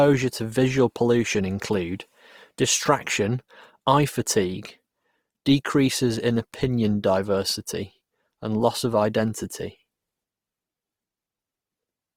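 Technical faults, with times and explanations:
Throughout, Opus compression. The speech sounds rough and grainy across the whole clip. High frequencies remain present, so the band is not narrowed, but their texture turns noisy and hissy instead of clean. There is little swirling. This likely comes from Opus in its music mode. When bits run short, it fills bands by copying lower ones or inserting noise. The damage is plainly audible, which points to a low bitrate near 24 kbps.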